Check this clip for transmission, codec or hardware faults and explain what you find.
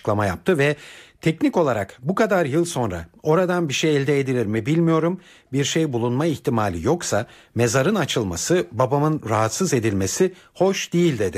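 Checking this clip turns up no faults to explain.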